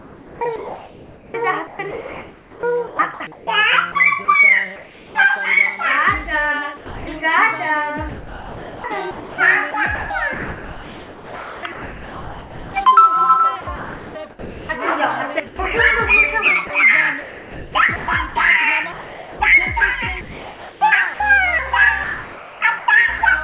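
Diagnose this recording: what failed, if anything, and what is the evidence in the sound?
The fault sits at the call-processing stage: sound chopped by the voice detector, likely from the sender's detector repeatedly gating transmission. It runs from 0.0 to 5.15 s, 8.09 to 12.74 s, 13.61 to 15.59 s, 16.67 to 19.4 s, 20.21 to 21.2 s and 22.04 to 23.21 s. Quieter passages are swapped for synthetic comfort noise, about 3.5 s of it in the 8.09 s stretch alone. On a waveform the envelope shows abrupt cut-ins and cut-outs. A spectrogram shows detail inside the roughly 4 kHz band (consistent with G.711 mu-law) alternating with smooth, featureless noise patches.

A single sound dropped by the voice detector occurs at 6.77 to 7.07 s, also at the call-processing stage. The sender likely classified a quiet tail as background and stopped transmitting. About 290 ms of sound is lost and 300 ms of steady comfort noise fills the gap before the detector triggers again. 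The waveform shows a flat, low-level plateau with clean edges. The spectrogram shows an unstructured noise band with no harmonic or transient content.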